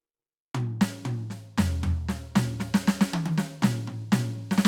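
A music clip with no technical faults audible.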